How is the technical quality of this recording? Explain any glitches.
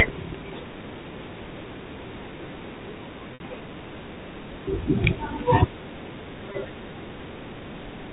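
The recording has three brief dropouts, carried over a telephone-band channel where the G.711 coding itself adds at most a faint hiss and nothing above 4 kHz.

At 3.34 to 3.40 s, 4.84 to 4.86 s and 6.52 to 6.54 s, the sound briefly freezes into a held, buzzy tone. This is packet loss with pitch repetition. Audio went missing, about 60 ms at the first point and 20 ms at the others, which fits one to three lost packets. The receiver filled each gap by looping the last pitch cycle and fading it, producing that slightly held, buzzy note before normal sound resumes.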